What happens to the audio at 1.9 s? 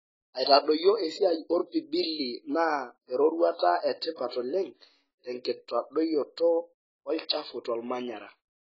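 At 1.9 s the speech has been squeezed through a lossy codec, likely AAC compression at a very low bitrate, and this persists across the whole clip rather than starting there. Short of bits, the encoder discards everything above 7.6 kHz and coarsely quantises what remains, so the sound is dull and smeared, with heavy damage: sibilants turn fizzy and sustained sounds warble, consistent with AAC-LC running at around 16 kbps.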